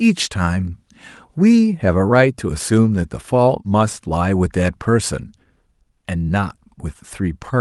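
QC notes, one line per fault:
No faults found; the speech comes through a WebRTC call path working as intended, and the Opus coding leaves only its usual coding noise and its normal upper band limit at 12 kHz.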